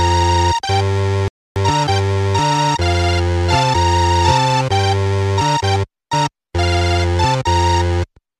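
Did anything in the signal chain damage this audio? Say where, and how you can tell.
Yes. At the playback stage, the player's download buffer ran dry and a rebuffering stall occurred. From 1.28 s to 1.56 s the sound drops to silence, then picks up exactly where it left off, with no skipped material and no repeat. The player simply halted output until enough data had arrived to continue, so nothing was lost, but 281 ms of dead air was inserted into the timeline at that point.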